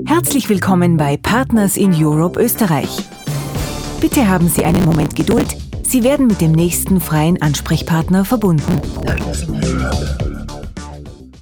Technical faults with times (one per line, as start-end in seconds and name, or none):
4.58-5.47 processor overload crackle
8.62-9.24 processor overload crackle